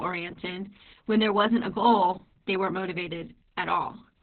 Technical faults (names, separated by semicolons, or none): Opus voice compression